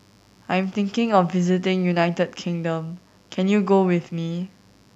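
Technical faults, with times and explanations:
Throughout, mains buzz: a steady, raspy buzz sits under the speech at about 40 dB below it, built on the 50 Hz mains frequency. Its harsh edge comes from sharp switching spikes, such as those from a dimmer, a rectifier or an unshielded cable, that enter the signal twice per mains cycle. Those spikes carry a dense series of 50 Hz harmonics reaching up into the kilohertz range, so the buzz sounds rough rather than like a pure low hum.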